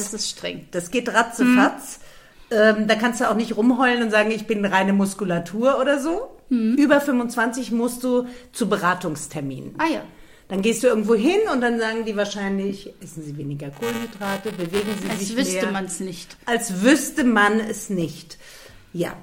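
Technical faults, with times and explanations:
13.73–15.21 s: buffer tearing. A constant robotic buzz at 345 Hz, fitting a 128-sample buffer: writer and reader cross every period, so a small slice of each buffer replays audio about 10 ms old, with hard joins. Unlike dropouts, nothing falls silent, and the buzz needs signal.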